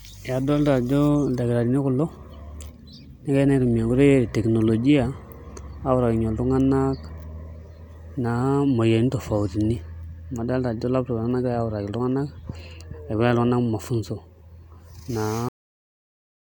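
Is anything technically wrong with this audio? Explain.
Yes. The speech has a cut-off end at 15.49 s: the final buffers were never written, so the sound stops mid-syllable and falls straight to digital silence for the last second. Unlike a fade-out or natural pause, there is no decay or trailing tail at all.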